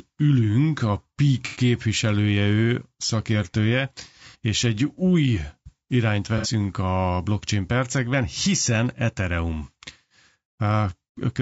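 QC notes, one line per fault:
Throughout: low-delay AAC compression. The speech sounds rough and grainy, with noise filling the gaps between harmonics and a thin, synthetic top band. This is likely short-frame AAC-ELD coding at a rate around 32 kbps. On a spectrogram the harmonics look blurred and the upper band looks patchy and smeared.
1.46–1.60 s, 4.28–4.36 s (after "ő szakértője", before "és egy új irányt"), 6.38–6.47 s (after "és egy új irányt", before "a blockchain percekben hiszen"): AAC frame loss with concealment. Short smeared, phasey patches appear where the decoder filled lost audio from the previous spectrum. The first gap is about 90 ms, which fits three frames. The others are about 60 ms each, which fits two frames. The spectrogram shows a frozen, noisy smear, and the waveform shows a brief loss of structure.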